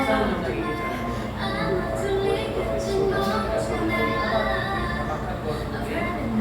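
No technical faults are audible anywhere in the recording.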